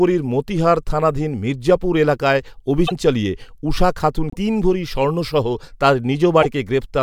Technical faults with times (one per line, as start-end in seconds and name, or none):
2.86-2.92 broken MP3 bit reservoir
4.30-4.36 broken MP3 bit reservoir
6.41-6.46 broken MP3 bit reservoir